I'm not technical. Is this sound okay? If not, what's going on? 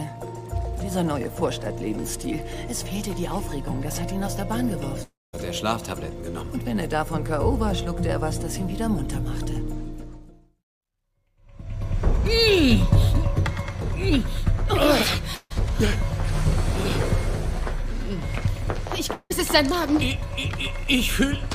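No. Likely long network dropouts at 5.03–5.35 s, 15.35–15.52 s and 19.12–19.32 s: sound briefly buzzes or hisses, fades to silence, then resumes with a piece missing.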